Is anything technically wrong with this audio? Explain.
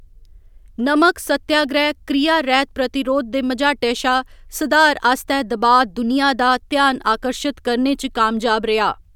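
No, the speech recording has no technical faults that can be heard.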